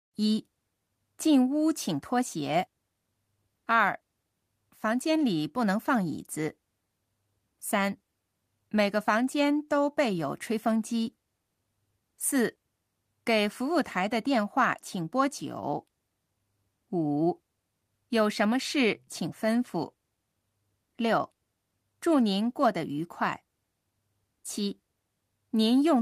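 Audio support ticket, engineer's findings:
Listened to the whole speech recording and found nothing wrong with it, so there's nothing to chase on this ticket.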